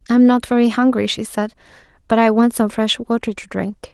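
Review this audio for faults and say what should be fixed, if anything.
Nothing needs fixing in this speech clip. It carries light Opus voice compression in its hybrid mode, with the band kept at full width, which fits a rate of around 20 kbps.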